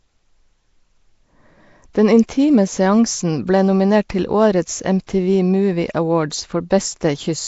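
From start to end, the speech carries Nellymoser compression damage, plainly audible. The likely cause is the old Flash microphone codec, Nellymoser Asao. It codes short blocks at a fixed, low bit budget, which fits around 32 kbps. Quiet bands get no bits and are refilled with noise. That gives the speech a rough, hissy halo and a smeared, underwater quality. Nothing sounds above 7.7 kHz, so the top end is dull.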